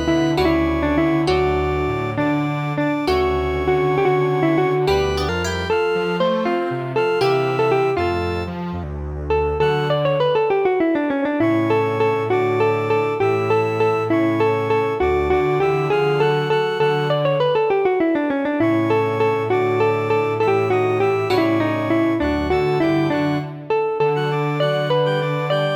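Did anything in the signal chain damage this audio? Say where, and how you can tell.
Yes. From 5.29 to 8.84 s there is a section at the wrong speed: the audio runs 1.19 times too fast and rises by about three semitones, then snaps back to normal. Tempo and pitch move together, which rules out a pitch-shifter or time-stretch, since each of those changes only one. The likely cause is at the editing or playback stage, where this stretch was clocked at the wrong rate.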